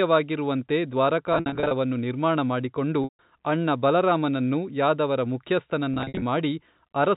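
Packet loss with pitch repetition occurs three times in this speech. From 1.33 to 1.71 s, before "ನಿರ್ಮಾಣ ಮಾಡಿಕೊಂಡು ಅಣ್ಣ ಬಲರಾಮನನ್ನು", scattered gaps of up to 60 ms become brief buzzy holds. From 3.04 to 3.19 s, between "ನಿರ್ಮಾಣ ಮಾಡಿಕೊಂಡು" and "ಅಣ್ಣ ಬಲರಾಮನನ್ನು ಯಾದವರ", a 150 ms loss fades to silence. From 5.94 to 6.22 s, the buzzy holds return. Unlike plain dropouts, each gap begins with the last pitch period held, not a click or abrupt silence, all over G.711's 4 kHz telephone band.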